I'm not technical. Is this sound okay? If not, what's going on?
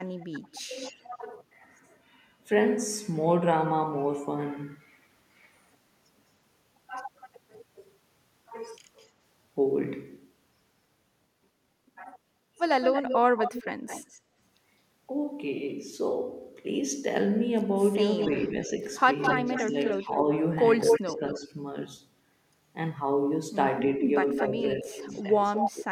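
No. There are two problems in this speech.

The first is echo leak. A delayed copy of the voice comes back about 0.2 seconds late. It happens at 0.16 to 1.04 s, 8.98 to 9.06 s, 12.82 to 14.2 s, 18.2 to 21.17 s and 24.39 to 25.71 s. It is faint around 9 s. It is nearly as loud as the voice at 12.8 s and 24.4 s, and just as loud at 18.2 s. The likely cause is a speakerphone whose echo cancelling missed part of the sound.

The second is speech suppressed in double talk. The voice suddenly dips while the echo overlaps it. This happens at 0.32 to 0.75 s, 13.33 to 13.56 s, and on and off from 18.51 s to the end. The dips are deepest in that last stretch. The likely cause is echo cancelling that turned everything down when both sounds played at once.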